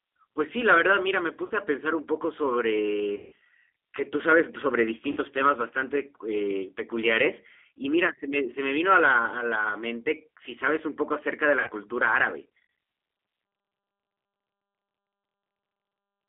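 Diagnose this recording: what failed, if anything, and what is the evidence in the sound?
Codec stage: the G.729 codec limits the audio to roughly 300 Hz to 3.5 kHz and gives the speech a rough, synthetic texture throughout, consistent with 8 kbit/s pulse-based reconstruction.

Network stage: VoIP packet loss, concealed by the speech codec, occurs at 1.46, 3.16, 5.11 and 11.60 s. The longest gap is 160 ms at 3.16 s, where the decoder extrapolates from the last pitch and filter into a fading buzzy tone or coloured noise before recovering.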